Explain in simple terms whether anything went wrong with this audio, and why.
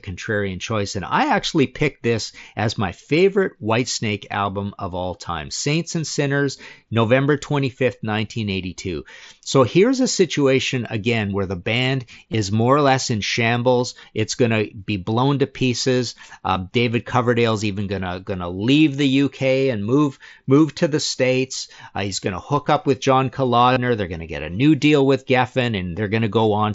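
Yes. Four very brief blips break up the speech. At 12.32 s, between "again where the band" and "more or less in", about 15 ms goes missing. Two shorter gaps of about 7.5 ms fall at 18.05 s, just before "gonna leave the", and at 22.65 s, between "he's going to" and "up with". The longest, about 38 ms from 23.73 to 23.77 s, sounds like a short buzzy hold. This is concealed Bluetooth headset packet loss. The headset link to the phone dropped audio, and the phone filled each hole by repeating a closely matching bit of the sound just before it.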